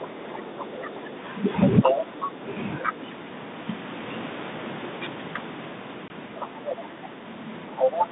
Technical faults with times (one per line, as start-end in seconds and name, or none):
0.00-0.89 other side's voice leaking through
0.09-1.14 speech suppressed in double talk
1.82-2.01 other side's voice leaking through
1.84-3.01 speech suppressed in double talk
2.82-2.92 other side's voice leaking through
6.08-6.11 packet loss on an ADPCM call
6.38-7.07 other side's voice leaking through
7.76-8.07 other side's voice leaking through
7.83-8.10 speech suppressed in double talk